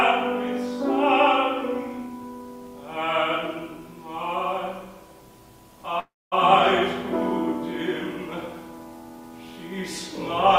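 At 5.99 s, packets were likely delayed in transit and the jitter buffer ran dry, producing a call audio freeze until 6.34 s. The last sound decays into a brief fading buzz, then about 230 ms of silence. The audio resumes where it stopped, with nothing lost, but 322 ms late.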